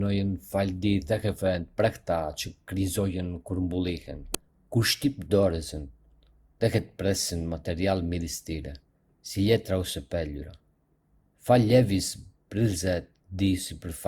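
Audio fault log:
Throughout, generation loss: the speech sounds swirly, hollow and smeared, with softened attacks, likely from about four successive Opus passes near 64 kbit/s. Unlike a single low-bitrate encode, the bandwidth stays wide up to 20.2 kHz, yet fresh quantisation on shifting frame grids compounds noise.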